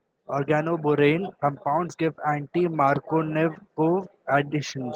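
Sample clock jitter runs throughout the speech, roughly a microsecond of timing wobble. It adds faint hiss, about 45 dB down, strongest on loud, bright sounds.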